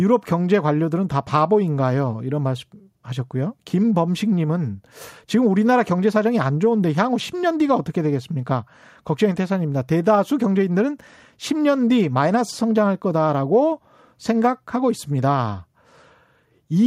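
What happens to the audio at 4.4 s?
Nothing goes wrong at 4.4 s; the speech runs through that moment without any dropout, click, glitch or other audible fault.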